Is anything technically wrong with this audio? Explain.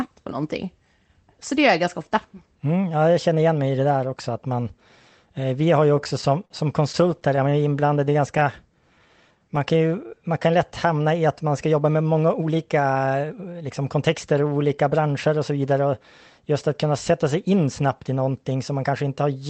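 Yes. The audio has timing faults from a jitter buffer. The call codec behind it, Opus, keeps the high end cut off at about 8 kHz.

Repeated stalls (stutter) occur from 5.97 to 6.52 s and from 6.92 to 8.43 s. Packets arrived late, and the buffer ran dry again and again. Each time the receiver kept the last sound going until data returned. The first span has five gaps, totalling 88 ms, with the longest at 51 ms. The second has eleven shorter gaps, totalling 129 ms, none over 21 ms. Nothing is lost. The speech catches and drags.

A jitter buffer slow-down runs from 7.86 to 10.47 s, overlapping the second stutter span. The buffer needed a larger reserve. So the receiver repeated single pitch periods or slices of pause, many times over. That added 194 ms. The speech plays at about 93% speed with unchanged pitch. Sounds are stretched and the delivery feels sluggish.

A jitter buffer speed-up follows from 12.34 to 14.35 s. 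Here the buffer held more audio than its target. The receiver trimmed short pieces of one or a few pitch periods, again and again. Roughly a fifth of a second was removed. The speech runs at about 111% speed, still at normal pitch. It sounds rushed.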